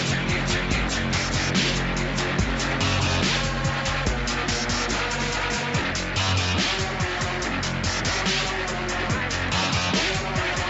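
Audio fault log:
Nothing to log here: the audio comes through a normal call chain, with the usual top end stopping around 8 kHz, and nothing goes wrong along the way.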